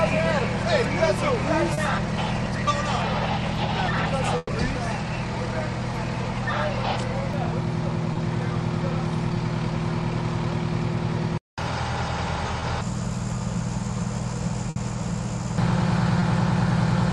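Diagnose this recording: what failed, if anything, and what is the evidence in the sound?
Short concealed packet loss on the network path. Brief smears or wobbles sit at 1.73, 8.13, 12.60 and 16.20 s. Each hole, 20 to 40 ms long, was filled by the receiver extending the preceding sound, then blending back into the real audio.

Burst of packet loss, also network. At 4.37 to 4.51 s, about 120 ms is missing. It is bridged by a fading continuation of the last sound, with a 10 ms dropout. At 14.70 to 14.78 s, a 60 ms gap is concealed the same way. Audio then resumes further on.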